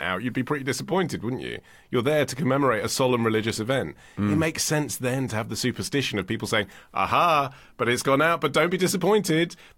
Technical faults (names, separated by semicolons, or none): none